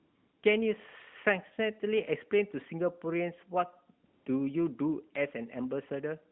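From 0.00 to 0.44 s, and again from 4.06 to 4.26 s, the background becomes a smooth, steady hiss. This is AMR comfort noise: the sender judged the line silent and stopped sending speech frames, so the receiver synthesised stand-in noise.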